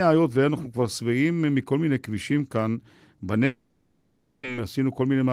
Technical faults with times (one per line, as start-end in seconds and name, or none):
3.45-4.47 long network dropout